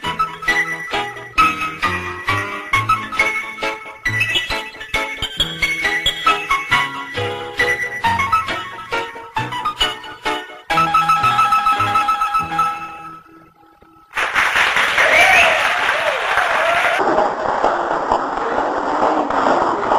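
From 16.99 s to the end of the audio, the sound abruptly turns deep and sluggish, dropping roughly ten semitones as it slows to 0.519 times its proper rate: a section at the wrong speed, likely from playback or editing against a mismatched clock.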